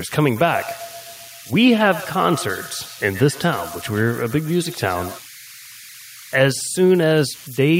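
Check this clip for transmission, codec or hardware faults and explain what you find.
Two faults stand out: converter idle tones running through the whole clip, and a feedback echo between two devices during the first five seconds.

Converter idle tones, throughout: a delta-sigma converter working without dither settles into repeating bit patterns on low-level input. Here that produces a faint whistle around 2 kHz, about 22 dB below the speech, most noticeable in pauses and as graininess under quiet passages.

Feedback echo between two devices, from 0.36 s to 5.27 s: a second device in the room replays this microphone's signal, which gets picked up again. Only the local echo canceller's own output is removed, so the speech returns roughly every tenth of a second, thin and ringing, peaking about 16 dB below the speech.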